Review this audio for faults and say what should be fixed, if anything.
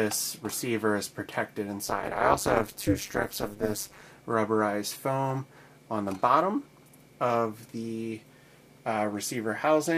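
From 1.83 to 4.03 s there is overlap-add ripple. The frames were windowed and summed back with an overlap whose gains do not add to a constant, so the level swings by about 60 dB once per frame, around 200 times a second, producing a metallic buzz with extra tones around each note. Choosing a window and hop size that satisfy the constant-overlap-add condition, or dividing by the summed window, prevents it.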